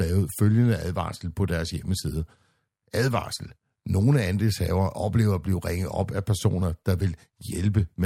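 No technical faults are audible.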